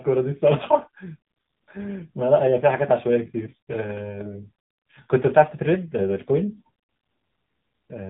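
From start to finish the speech carries the AMR narrowband mobile codec sound, with damage that is plainly audible. The narrowband codec cuts everything above 4 kHz, so sibilants lose their edge and the voice turns boxy and phone-like. The coarse vocal-tract model and sparse pulse excitation, at a rate that fits about 7.4 kbps, add a buzzy, synthetic grain. On a spectrogram the energy stops dead at a flat 4 kHz ceiling, and the harmonics look smeared.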